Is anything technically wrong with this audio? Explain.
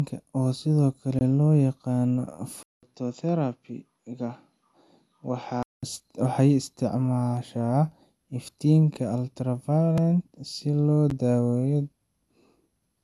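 Yes. The speech has three distinct faults.

Throughout the clip there is generation loss. The sound is swirly and hollow, consonant attacks are smeared, and nothing is present above 12.5 kHz. That points to an MP2-type codec at around 128 kbit/s, but it sounds worse than a single pass at that rate should. The likely cause is about five successive decode and re-encode passes. Each pass requantises on a shifted frame grid, so the noise and spectral holes accumulate.

A block of digital silence occurs three times: from 1.19 to 1.21 s (a 20 ms hole), at 9.98 s (about 2.7 ms), and at 11.10 s (10 ms). In each case the signal drops straight to silence and returns with no fade. The 20 ms gap is heard as a brief dropout, and the two shorter ones as ticks. This is typical of an output buffer that wasn't filled in time.

From 2.63 to 5.83 s the input switched to a poorer device, most likely a different microphone or a headset call profile. 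There is about 200 ms of silence at the switch. After it, the band is cut off at 7.6 kHz, so the sound turns dull and boxy. The level falls by about 5 dB, and a new noise floor sits about 50 dB below the signal. The original character returns at 5.83 s.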